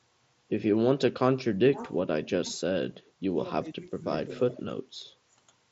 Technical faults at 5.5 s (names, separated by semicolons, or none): none